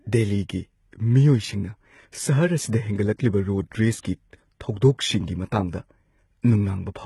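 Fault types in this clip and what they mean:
HE-AAC compression: The treble sounds gritty and lispy on s sounds, with nothing above 11.8 kHz. It is heavy damage that fits a 16 kbps stream, likely from HE-AAC, which codes only the lower spectrum and rebuilds the top by copying lower bands upward.
pre-echo: A short hiss of about 53 ms runs ahead of a sharp attack from 3.99 to 4.05 s, softening its onset. The codec spreads quantisation noise across a whole block, so noise meant for the loud attack also fills the quiet moment before it.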